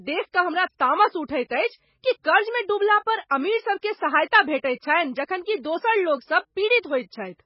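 Speech that sounds watery and swirly throughout, with everything above 5.5 kHz missing and heavy smearing, is likely MP3 compression, with damage this severe pointing to a bitrate as low as about 16 kbps. At 0.32 s, just before "कऽ हमरा तामस", a hiss of about 18 ms precedes a soft, smeared attack: pre-echo, where the codec's quantisation noise spreads into the quiet moment ahead of the onset.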